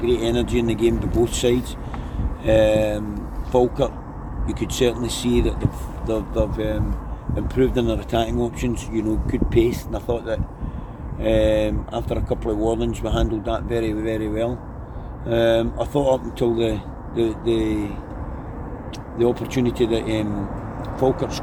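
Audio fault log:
No faults can be heard anywhere in this audio.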